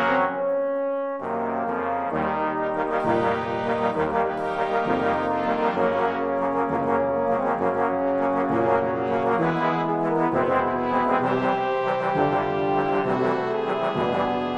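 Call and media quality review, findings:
100 Hz buzz under the sound throughout, present only while signal plays. Resampler restarted on every block, 48 kHz to 44.1 kHz: each 10 ms block converted in isolation, so every block edge adds a small error at the block rate.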